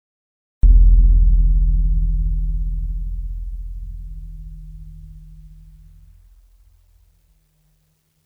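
A music clip opening on digital silence until 0.63 s, where the music bursts in mid-sound with no attack or fade-in. It's a cut-off start: recording or streaming began late, so capture joined a passage already underway rather than at its natural beginning.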